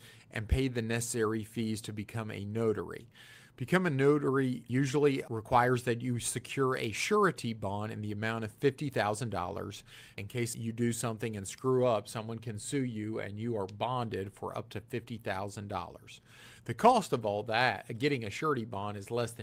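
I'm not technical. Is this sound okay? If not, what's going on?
Yes, nothing about this recording stood out as a problem when I listened to it.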